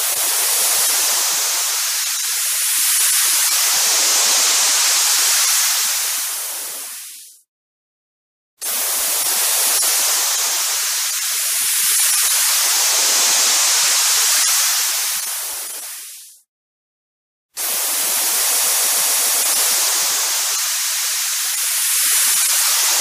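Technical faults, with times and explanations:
18.56–19.39 s, repeated frames: a stuttering loop, one 139 ms block playing six extra times, which fits three compressed frames sent again. This adds about 0.84 s.
20.83–21.20 s, repeated frames: a shorter stutter, a 186 ms block replayed twice more, which fits four frames duplicated. This adds about 0.37 s.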